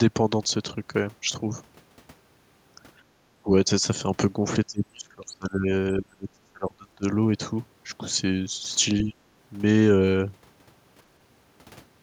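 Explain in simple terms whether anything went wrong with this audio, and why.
At 3.06 to 3.15 s, the room sound behind the talker briefly dips away for about a tenth of a second, then returns. This is background gated by the echo canceller: while sound played from the loudspeaker, the system turned the microphone down hard, then let go.

The talker's own voice also fades or drops out in patches. There is a tiny dip at 3.43 to 3.47 s, long stretches from 4.66 to 5.70 s and 5.96 to 7.04 s where it turns very faint, and a short dip at 9.03 to 9.17 s. The likely cause is speech suppressed in double talk: with both sides talking at once, the echo canceller couldn't separate the talker from the loudspeaker echo, so it turned both down.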